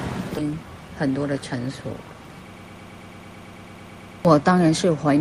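Around 0.37 to 0.52 s there's a skip ahead: roughly 0.7 s of audio gets dropped and playback jumps forward, with the two sides joined almost directly. From 0.95 to 1.32 s you get a jitter buffer speed-up, where the receiver trims short pieces, around 50 ms in total, so the sound runs about 11% faster at unchanged pitch and feels hurried. Then from 2.54 to 4.25 s there's a broken-record loop: a 110.5 ms fragment repeats back to back 15 times, likely because the stream stalled and kept resending its last chunk, and whatever should have played there is gone.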